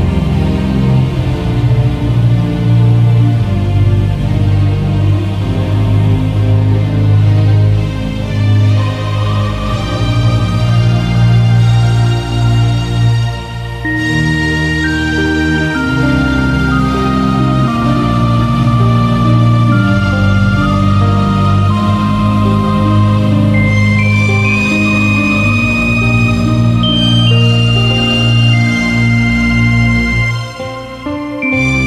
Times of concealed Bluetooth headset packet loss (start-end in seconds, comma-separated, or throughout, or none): none